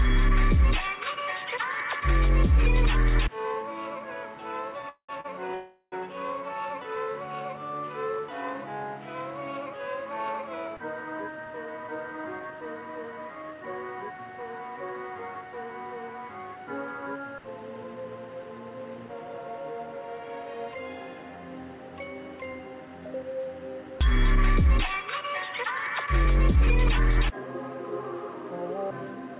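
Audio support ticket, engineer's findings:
Stutter, repeated stalls, 4.82–5.26 s: sound catches three times, last fragment stretched, the longest hold 196 ms, over half the span concealed. Jitter buffer repeatedly ran dry on late packets; receiver extended the last sound, nothing dropped, playback just drags.

Call audio freeze, 5.54–5.94 s: sound hangs on a fading continuation for 376 ms, the final 80 ms silent, then resumes exactly where it stopped. Likely delayed packets emptying the jitter buffer; gap inserted, nothing lost, delay up 376 ms.

Jitter buffer speed-up, 25.64–27.39 s: audio slightly faster, running at 103% speed with unchanged pitch. Buffer overfilled, and receiver trimmed pitch-period-length slices repeatedly, about 70 ms in total, to pull latency back down. Path is band-limited, nothing above 4 kHz, consistent with G.711 mu-law.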